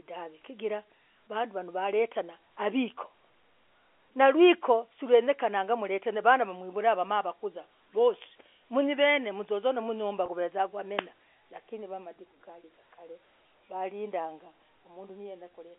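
At 10.26 to 10.28 s, a packet went missing and the receiver repeated the last pitch period over the gap, about 20 ms, giving a briefly held, buzzy tone.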